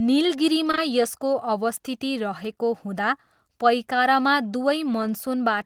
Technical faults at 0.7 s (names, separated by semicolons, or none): short concealed packet loss